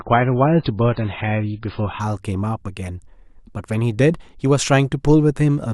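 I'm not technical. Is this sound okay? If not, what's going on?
No. The player began with an adaptive stream starting at a low bitrate, then switched up at 2.0 s. Before that, speech sounds dull and smeary, with nothing above about 5.1 kHz.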